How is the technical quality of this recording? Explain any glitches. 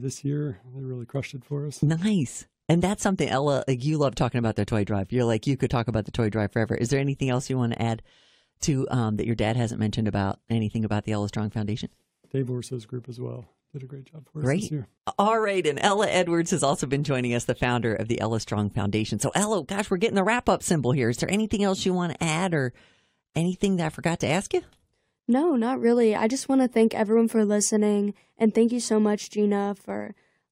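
The technical quality of the recording holds up throughout, with no glitches to explain.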